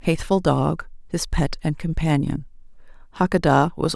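Speech, and nothing is technically wrong with it.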